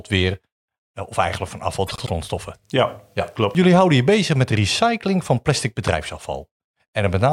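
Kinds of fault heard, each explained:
Frames out of order: after "of eigenlijk van afval", two 96 ms runs of four frames play swapped, giving a garbled flutter; the spectrogram shows discontinuities at three joins.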